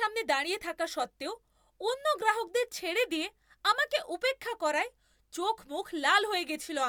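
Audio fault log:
No faults detected in this speech recording.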